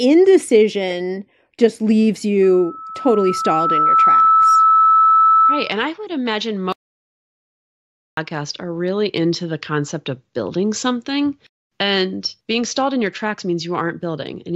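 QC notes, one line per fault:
2.42–5.81 s, loudspeaker feedback squeal: a single 1.3 kHz tone swells out of the speech over roughly a second and a half, peaking about 5 dB above it, as the mic-to-speaker loop gain exceeds unity there. That self-reinforcing build-up distinguishes it from a steady interfering tone.
6.73–8.17 s, audio dropout to silence: the speech cuts off mid-flow and 1.45 s of it is lost, replaced by silence with no room tone, unlike a natural pause or noise gate. The input link likely failed while the recorder kept writing silence.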